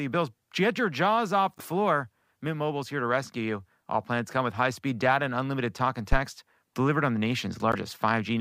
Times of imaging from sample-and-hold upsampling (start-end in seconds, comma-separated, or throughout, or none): none